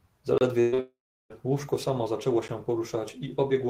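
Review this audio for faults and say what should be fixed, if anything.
Block of digital silence at 0.38 to 0.41 s (30 ms) and at 2.48 s (10 ms), just after "łóżko samo zaczęło": the audio drops to silence with hard edges. Enlarge the output buffer so it is always refilled in time.

Burst of packet loss from 0.60 to 0.74 s: about 120 ms missing, bridged by a decaying continuation of the preceding sound. Add jitter buffering and forward error correction.

Short concealed packet loss from 0.74 to 0.80 s: 40 ms synthesized from the last sound, then blended back, giving a brief smear. Packet redundancy or FEC would cover this.

Long network dropout from 0.80 to 1.32 s: 500 ms gone, a fading fill then 330 ms of silence, audio resuming at "łóżko samo zaczęło". The likely cause is a network outage. Use a more stable connection with retransmission.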